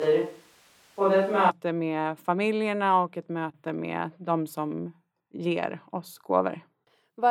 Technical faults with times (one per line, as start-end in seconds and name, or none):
0.00-1.49 switch to a distant microphone